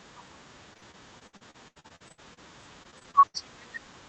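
From 0.73 to 2.39 s and again from 2.83 to 3.36 s, repeated packet loss (robotic sound) chops the speech. Missing stretches, up to 77 ms long, are filled by stretching earlier sound, giving a choppy quality with pieces missing.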